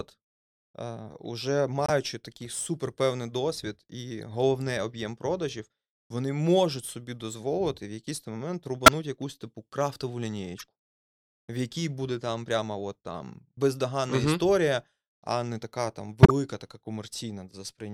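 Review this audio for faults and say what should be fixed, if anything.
The speech has five corrupt frame decoded events: at 1.86–1.90 s, at 4.22 s, at 8.86–8.93 s, at 10.58–10.62 s and at 16.23–16.31 s. Each is a brief chirp or noise burst. The ones near 8.9 s and 16.3 s are loud, peaking around -5 dBFS. The one at 4.22 s is faint. Damaged bits in two or three compressed frames each time made the decoder rebuild energy at the wrong frequencies. To prevent it, add error detection and conceal bad frames instead of decoding them.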